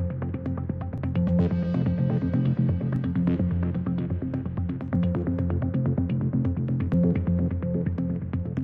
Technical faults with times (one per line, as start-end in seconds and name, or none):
0.98 overlap between stream segments
2.96 overlap between stream segments
4.95 overlap between stream segments
6.94 overlap between stream segments